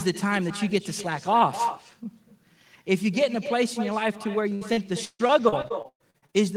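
Echo with no canceller runs through the whole speech clip. The far end's loudspeaker is being picked up by its microphone and nothing removes it, so every phrase returns roughly 0.3 s later as a thinner copy about 11 dB below the direct sound. Repeated packet loss (robotic sound) takes over from 4.49 to 6.35 s. Over a dozen holes open in quick succession, the longest 142 ms. Each is patched by stretching the last sound, so about a third of that stretch is synthetic fill, which gives choppy speech with pieces missing.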